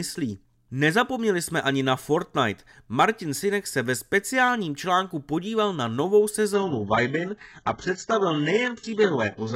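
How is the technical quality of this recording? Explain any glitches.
The recording has one glitch, an adaptive stream at a lower bitrate, from 6.54 s to the end. At that point the speech suddenly loses its treble, with nothing above 8 kHz, and the codec artefacts become more obvious. There is no gap at the switch. The player dropped to a lower-quality rendition when the connection slowed, and the sound fits a change from a normal AAC stream to a very low-bitrate HE-AAC one.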